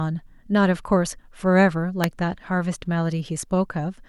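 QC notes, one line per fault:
2.04 s, electrical switching spike: a sharp snap, peaking around -5 dBFS, sits on top of the speech, likely a nearby switch arcing into the audio line.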